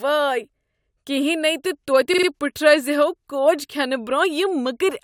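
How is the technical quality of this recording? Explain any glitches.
One glitch is audible in the speech: a short stutter from repeated frames between 2.13 and 2.26 s. A block of compressed audio about 46 ms long, consistent with two codec frames, was stored or transmitted more than once, so the decoder plays the same fragment three extra times in a row. The result is a rapid mechanical stutter that briefly interrupts the flow of speech. Because of the repeats, the recording is about 0.14 s longer than the original.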